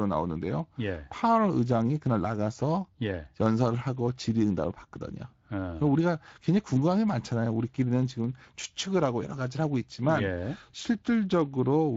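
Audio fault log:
Throughout: Speex codec. The speech carries plainly audible Speex coding damage, consistent with a bitrate near 20 kbps. As a CELP coder, Speex models each short frame with a vocal-tract filter driven by a coded excitation, and with a limited bit budget that excitation is only approximated, which leaves a noisy, hoarse texture on the voice. Any content above 8 kHz is not coded as such, only replaced by shaped, noise-like fill.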